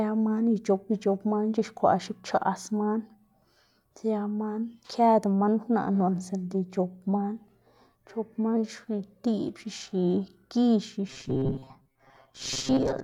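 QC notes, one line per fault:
11.08–13.03 s, robotic sound from repeated short buffers. The speech becomes a rigid, metallic buzz near 133 Hz until the end. Roughly half the audio is repeated material. The likely cause is a buffer of about 7.5 ms replayed while new audio was skipped.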